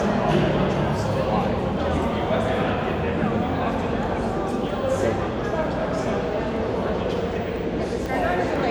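A recording of sound, hit by periodic USB or driver dropouts from 6.06 s to 8.56 s: something stalls the audio path every 0.5 s, and roughly a millisecond of signal is skipped each time. The result is a regular train of ticks, about seven in all, heard over the sound.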